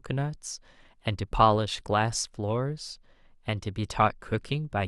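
No technical faults are audible.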